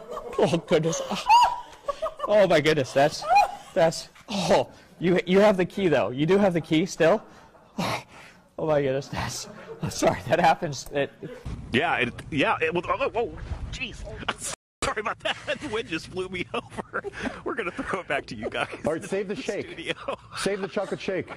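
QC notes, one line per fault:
14.54–14.82 s, rebuffering stall: the player drained its downloaded buffer and halted playback until fresh data arrived, so the sound drops to dead silence for about 0.29 s, then picks up exactly where it broke off, with nothing missing but the timeline stretched.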